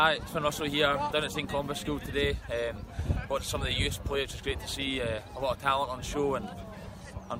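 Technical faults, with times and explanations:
0.04–2.32 s, train of clicks: uneven ticking about 11 times a second, around thirty clicks peaking about 5 dB above the sound, likely interference pulses.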